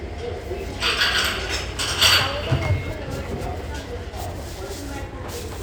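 Nothing stood out on listening to these sounds.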